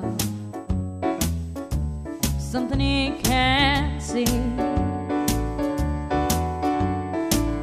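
Current drawn by the USB bus in its 125-microsecond microframes is leaking into the audio path through the power or ground, and the result is USB whine. It is a steady, fixed-pitch tone at 8 kHz, strongest at that frequency, sitting roughly 35 dB below the wanted sound and present for the whole clip. Because it never moves in pitch, it reads as a thin, high whistle riding continuously on top of the audio.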